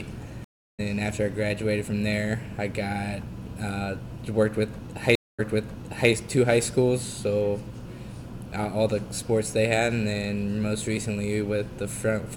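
At 0.44 s the sound drops out for 344 ms and comes back about a third of a second further on; at 5.15 s a 233 ms gap is followed by material repeated from 720 ms earlier. Both are stream reconnects: the connection broke and a fresh decoder resumed mid-stream.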